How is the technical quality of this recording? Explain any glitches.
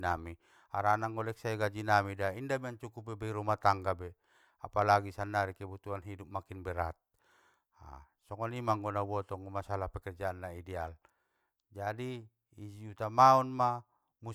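Nothing in this recording stood out as a problem on listening.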